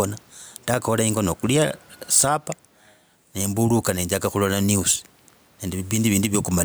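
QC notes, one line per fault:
Throughout, gain pumping: the gain swings about 5 dB, with room noise about 40 dB under the speech, likely from excessive input gain with a fast limiter. Waveform peaks look flattened, and the spectrogram's noise floor breathes between phrases.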